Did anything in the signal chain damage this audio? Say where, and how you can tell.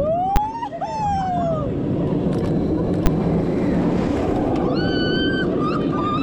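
Yes, invalid numbers at full scale from a processing calculation: single bangs at 0.36 s and 3.06 s, where 10 ms blocks of infinite or invalid values jumped to one extreme, flat and far beyond the audio's peaks, unlike clipping, which only flattens the tops.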